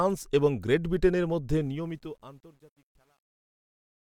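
From 1.61 s, just after "এবং গ্রেট ব্রিটেনের মধ্যে", the fade-out to the end of the speech suffers truncation distortion on a fade: the gain stage drops low-order bits without dither, so quiet waveforms collapse into coarse square steps. The grit fits roughly 10-bit resolution and is worst from 2.2 s to the end. Unlike dithered low-level hiss, this distortion follows the signal, appearing only with sound and thickening as the level falls.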